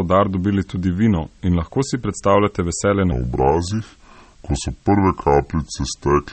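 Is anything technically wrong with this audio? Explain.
Yes, there are three problems in this speech clip, and two of them run the whole way through.

Low bit depth with dither runs from start to finish. There's a steady, even hiss sitting about 40 dB under the speech. It sounds like the audio was squeezed down to roughly 9 bits, with dither added before rounding. The dither trades the gritty rounding distortion you'd otherwise hear for a constant white-noise floor, so it stays clean but noticeably hissy.

The whole clip also has plainly audible MP3 compression damage, likely from a low-bitrate encode, and the sound fits something around 32 kbps. Nothing comes through above 8.4 kHz, so the top end is simply gone. The encoder is starving for bits, dropping quiet frequency detail and letting it flicker in and out frame to frame. That gives the speech a watery, swirly quality, with smeared consonant attacks and some metallic chirp on the sibilants.

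From about 3.12 s to the end, you get a section at the wrong speed. This is likely a clock mismatch in playback or editing, with the audio running at about 0.73 of its proper rate. Because speed and pitch move together, the voice drops about five semitones and slows right down at that point. It turns deep and dragging, and the change is sudden rather than gradual.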